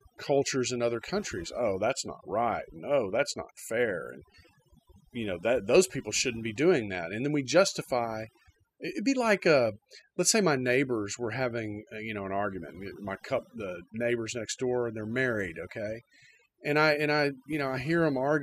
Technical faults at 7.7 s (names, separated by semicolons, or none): overdone noise removal